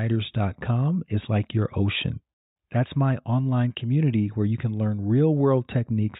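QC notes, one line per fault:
No fault found.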